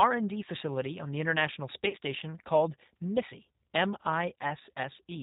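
From start to finish the speech carries the sound of the G.729 codec, with plainly audible damage. The band stops at 4 kHz, and the voice is slightly rough and synthetic, which fits an 8 kbit/s codec. Each 10 ms frame is rebuilt from a vocal-tract filter, a pitch predictor and a handful of pulses, so fine detail is replaced by a rough, synthetic texture. Simple band-limiting would only dull the sound, while this codec leaves the voicing itself grainy.

From 1.89 to 1.97 s, VoIP packet loss concealed by the speech codec can be heard. The missing stretch, which fits four lost 10 ms frames, is not a gap of silence. The decoder keeps repeating its last pitch and filter at falling gain, so the sound smears into a brief, fading buzzy tone or coloured noise, and the voice stays weak and distorted for a moment afterwards as the frames recover. A plain dropout would instead cut off abruptly or click.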